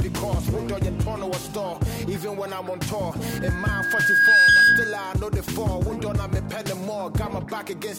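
At 3.28 s a loudspeaker feedback squeal kicks in: a single tone around 1.6 kHz that swells over roughly a second until it's sitting something like 15 dB above the rest of the sound, then it's gone at 5.15 s. What's happening is the mic is hearing the speaker it's driving, and at that one frequency the loop gain tipped past unity, so the tone kept feeding itself and growing.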